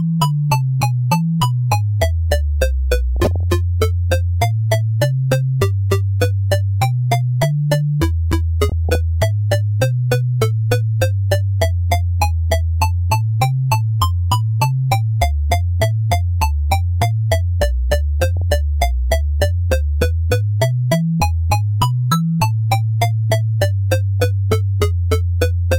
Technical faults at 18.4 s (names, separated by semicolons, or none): DAB burbling